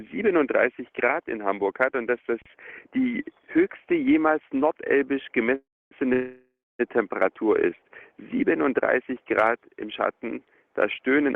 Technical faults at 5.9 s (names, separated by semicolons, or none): call audio freeze